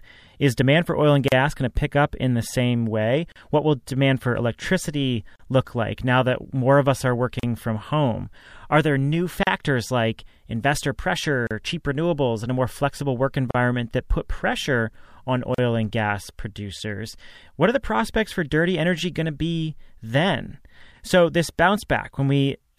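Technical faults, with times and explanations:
1.28 to 15.58 s, gap at a join of encoded pieces: the speech drops out for about 38 ms at 1.28, 3.32, 5.36, 7.40, 9.43, 11.47, 13.51 and 15.55 s, one every 2.0 s, for example between "more of us are" and "from home". The audio was encoded in separate 2-second pieces and joined untrimmed, so each piece's encoder start-up delay and last-frame padding remain as silence. Its smeared edges break the speech, which then resumes where it stopped.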